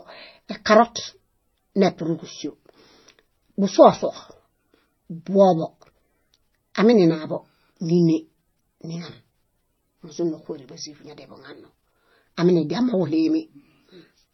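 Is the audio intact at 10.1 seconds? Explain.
No. At 10.1 s, as across the whole clip, the speech is band-limited with nothing above 5.9 kHz and carries two overlaid kinds of artefact, one from each codec. That points to transcoding between lossy codecs, likely a low-rate MP3 re-encoded as HE-AAC. A single codec would leave one consistent artefact texture. Here the second encoder spends bits re-coding the first one's damage and adds its own, so the two textures are heard at once.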